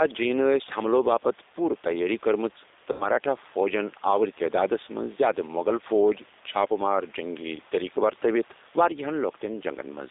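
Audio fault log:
Throughout: gain pumping. Level swings by roughly 5 dB, squashing dynamics; likely an overdriven input caught by a fast limiter.
Throughout: G.729 codec. Speech sounds plainly rough and synthetic, band-limited to about 300 Hz to 3.7 kHz, typical of low-rate 8 kbit/s model-based coding.
2.92–3.07 s: VoIP packet loss concealed by the speech codec. A fading smear replaces about 80 ms of speech before "فوجن آوۄر", as the decoder extrapolates its last pitch and filter.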